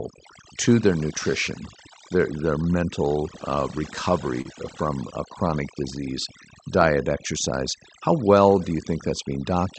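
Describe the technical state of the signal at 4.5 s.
Short concealed packet loss runs from 4.41 to 4.47 s, just before "from a chronic disease": about 40 ms of audio never arrived, and the receiver bridged the gap by extending the preceding sound before blending back, leaving a brief smear or wobble. Overdone noise removal is also present at this point, as it is throughout, pulling individual frequency bands far down wherever they sit near the noise estimate, so the background breaks into twinkling, warbling specks.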